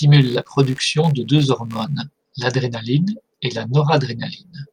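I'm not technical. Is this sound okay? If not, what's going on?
No. For the first two seconds there's a faint, low, rapid buzz under the speech, pulsing roughly seventy times a second. It's computer activity noise: the computer's changing workload disturbs the shared electrical ground of the audio circuit, so the buzz follows the machine's activity rather than the speech.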